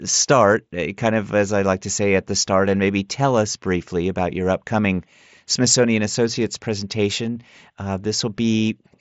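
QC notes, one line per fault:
7.35 s, concealed Bluetooth headset packet loss: a single voice packet of about 7.5 ms went missing over the mSBC link, and the receiver patched the gap by repeating a matching stretch of recent waveform, leaving only a barely audible seam in the speech.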